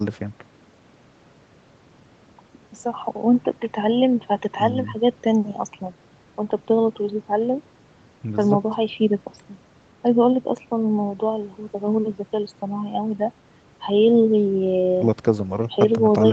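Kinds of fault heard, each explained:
No kinds of fault are heard in this speech clip.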